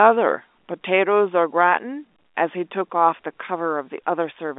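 There are no technical faults to describe in this speech, which comes through an ordinary telephone line with its normal narrow band.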